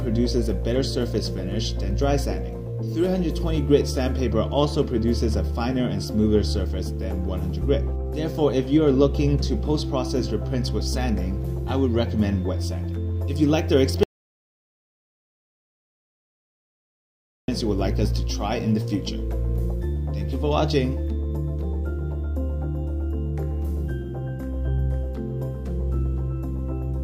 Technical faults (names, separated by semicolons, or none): audio dropout to silence